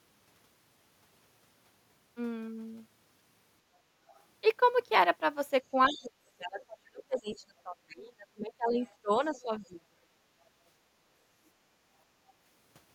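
Other side's voice leaking through first appears from 4.07 to 4.2 s as a faint scrap well below the speech, likely loudspeaker echo that the canceller failed to remove from the microphone.

Speech suppressed in double talk runs from 5.73 to 10.0 s. For about 3 s in total the talker dips by up to roughly 30 dB, likely because the canceller confused overlapping talk with echo and turned both down. Within that span the leaking voice returns at 5.86 to 6.03 s fairly prominently, at 7.01 to 7.37 s slightly quieter, and at 8.82 to 9.6 s faintly.

Background gated by the echo canceller follows at 10.28 to 10.57 s and 11.78 to 11.89 s. The room sound drops by about 10 and 11 dB while the loudspeaker plays, then recovers.

A last, very faint leak of the other side's voice surfaces from 12.28 to 12.32 s.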